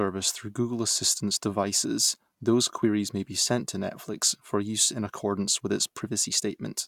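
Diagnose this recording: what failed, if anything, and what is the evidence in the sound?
Nothing failed; no stage of the chain leaves an audible fault anywhere in the speech.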